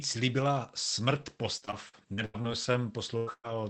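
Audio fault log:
1.13–2.77 s, repeated packet loss (robotic sound): The speech turns choppy and machine-like here. Seven separate gaps appear across this stretch, the longest 84 ms. About 260 ms of audio is missing in total, roughly 16% of the span. The receiver fills each hole by stretching the last sound it had. Because another hole follows soon after, these repeated patches blur together. That gives the robotic texture, with small pieces of speech simply gone.
3.17–3.29 s and 3.33–3.46 s, burst of packet loss: Two short dropouts come close together. Each loses about 100 ms of audio, which fits several packets in a row arriving too late. The receiver keeps playing the last sound and turns it down as each gap goes on. In the second burst it fades to silence for about 40 ms. The speech then picks up further along, and the part in between is lost.
3.27–3.29 s, 3.44–3.46 s and 3.48–3.50 s, lost packet rebuilt from error correction: Three single packets, 20 ms each, were lost here. 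They play without a gap because each was rebuilt from a low-bitrate copy carried in the next packet. That is Opus in-band forward error correction. The rebuilt frames sound rougher and noisier than the speech around them. The copies are coarse, and the 24 kbps Opus call path keeps the audio to about 8 kHz, so there is no extra top-end dip.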